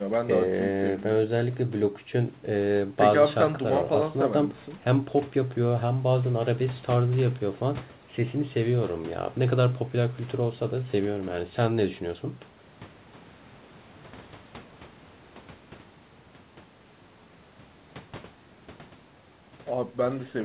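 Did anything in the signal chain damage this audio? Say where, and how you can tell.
No, nothing in the chain damaged this speech; the content stops at 4 kHz, which fits a narrowband call codec such as G.711 A-law on a normal call path, and the microphone processing ahead of it is working as intended.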